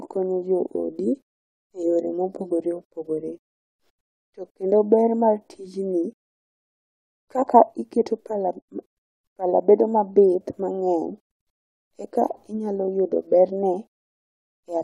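No technical fault can be heard anywhere in the speech. There is nothing to place in time and nothing to explain.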